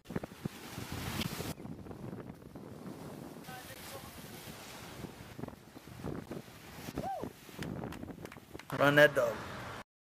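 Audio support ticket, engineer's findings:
Gap between chunks at 1.23, 3.74, 6.26 and 8.77 s. Symptom: brief hard-edged dropouts, about 13 ms each, repeating roughly every 2.5 s. Probable component: chunked transport or playback, with silence inserted at each chunk boundary, likely from codec padding or late chunk starts. No sound lost, only interrupted. Waveform: flat near-silent slivers with abrupt edges. Spectrogram: thin full-band vertical blank stripes at equal spacing.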